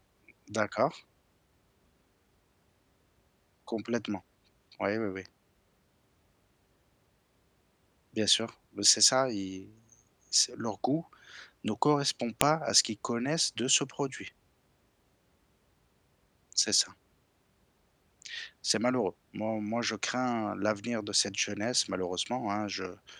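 A speech clip with one file header played as audio: at 12.41 s, right after "leur goût ne correspond", a sharp, loud click cuts in as the header bytes of a joined piece are decoded as samples. The waveform shows a brief spike, and the spectrogram shows a thin vertical broadband stripe.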